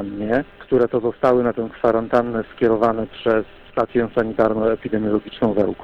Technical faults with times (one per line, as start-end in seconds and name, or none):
0.00-5.84 hard clipping